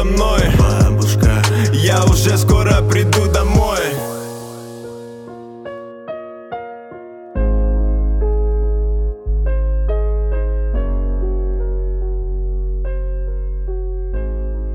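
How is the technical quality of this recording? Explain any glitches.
The technical quality of this recording is sound, with no glitches to explain.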